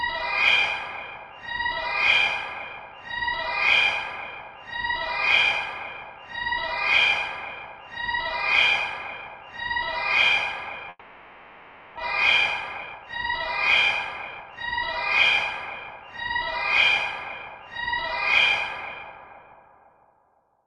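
At 10.89 s the sound gives way to a buzzy, hiss-like continuation of whatever was playing. It fades over about 1.08 s, with only a brief gap of silence of about 20 ms before the audio returns at 11.99 s. About 600 ms of material never comes back. This is a long network dropout, likely caused by packets failing to arrive for over a second. The receiver stretched the last received sound to cover the hole rather than play nothing.

From 12.81 to 13.31 s the audio suddenly rushes forward at the same pitch, running at about 135% speed. It does so again from 14.18 to 14.79 s at about 123%. Two milder hurried passages follow, from 17.24 to 17.88 s at about 107% and from 18.81 to 19.13 s at about 110%. This is jitter buffer speed-up. After the dropout the buffer held roughly half a second more than it wanted, so the receiver trimmed short pitch-period slices to catch up. Those slices add up to around a fifth of a second in the first burst, about 150 ms in the second, and a few tens of milliseconds in each of the last two.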